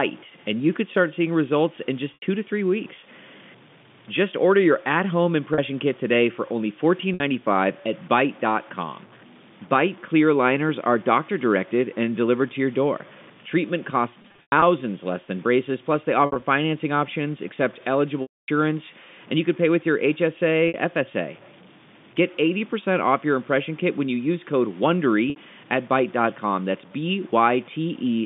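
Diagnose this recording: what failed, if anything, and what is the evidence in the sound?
There's a gritty, grainy roughness riding on the speech the whole way through, with a noise floor only about 25 dB under the signal that rises and falls with it. The quieter syllables get the worst of it. It sounds like low bit depth without dither, likely from a sample-format conversion stage that truncated the signal to around 7 bits, so the rounding error tracks the signal instead of sitting as a steady hiss.

On the network side there's packet loss with pitch repetition at eight points. Brief buzzy holds of 80, 40 and 60 ms come at 2.14, 5.54 (just before "kit today for only") and 7.14 s, with more 60 ms holds at 20.68 and 25.30 s. There are scattered dropouts totalling 200 ms across 14.22 to 14.62 s, and 100 ms across 16.26 to 16.42 s (after "than braces plus they"). A 260 ms gap at 18.22 s, right after "financing options accept", fades to silence before the speech cross-fades back in. 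The telephone band itself comes through as ordinary G.711.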